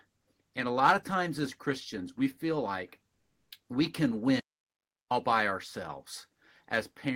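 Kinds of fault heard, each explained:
Comfort noise in place of the background: Between "we feel like" and "we can", from 3.13 to 3.49 s, the room tone gives way to a smooth, featureless hiss for 360 ms, shifting level by about 2 dB. The real background sits about 53 dB below the loudest speech. This is likely discontinuous transmission, probably Opus DTX: the sender goes quiet during the pause and the receiver fills it with synthetic noise.
Audio dropout to silence: Right after "we can", the sound cuts out completely from 4.40 to 5.11 s, roughly 0.7 s of silence with no room tone at all, then picks up again mid-flow. Whatever was said in that gap is simply gone. The likely cause is a lost input, such as a dropped link, a device hiccup or a brief mute, while the recorder kept writing silence.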